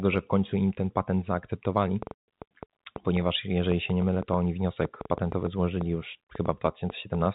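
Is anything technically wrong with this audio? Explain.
Yes, there are two faults.

From 2.03 to 7.27 s, a train of clicks runs at about 5.4 per second, irregularly spaced, roughly thirty in all, likely from electrical interference or a faulty connection. They pop through speech and pauses, peaking around 10 dB above the signal.

From 2.15 to 2.27 s, there is packet loss filled with silence. Lost data was replaced by a 140 ms hole, which fits seven 20 ms packets, and its abrupt edges cut the speech.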